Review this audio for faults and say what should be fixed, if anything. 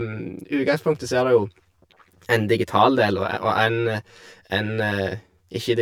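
Channel delay (comb filtering) throughout: one channel lags about 10 ms, hollowing the mono sum with notches every 100 Hz from about 50 Hz; unlike flanging, they stay fixed. Prevent it by aligning both channels in time before summing to mono.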